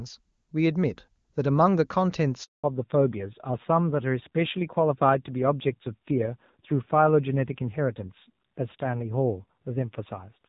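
At 2.44 s the speech cuts out in a handover gap. The call is being passed from one network link to another, and for 0.2 s no speech frames reach the decoder. The voice decays within a few tens of milliseconds and is followed by dead silence until the new link delivers audio again at 2.64 s. Whatever was said inside that window is simply missing.

From 2.64 s to the end, the call shows a fallback to narrowband. Up to the gap, the audio carries the open, extended top end of AMR wideband HD Voice, which fits its highest rate of 23.85 kbit/s. After the switch, everything above 4 kHz is gone. Sibilants lose their crispness, the voice turns duller and boxier, and a grainy roughness appears, consistent with AMR narrowband at a modest rate such as 7.4 kbit/s.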